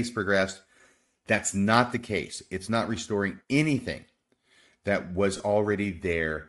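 Throughout the speech there is a breathy, grainy edge on the upper frequencies, with noise-like texture where fine detail should be. This is likely Bluetooth LC3 compression, plainly audible at a rate that fits around 48 kbps, where the transform codec discards upper spectral detail and substitutes noise. On a spectrogram, the top band looks speckled and diffuse rather than harmonically structured.

From 5.37 to 5.40 s, lost LE Audio frames leave a 30 ms gap, consistent with four dropped 7.5 ms frames. The decoder repeated the previous spectrum with scrambled phase, so the sound smears into a brief noisy blur. The waveform shows a short stretch of noise-like texture in place of the periodic speech waveform.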